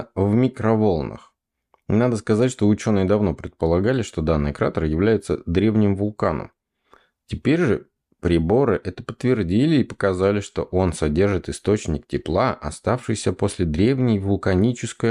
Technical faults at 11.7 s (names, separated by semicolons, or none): none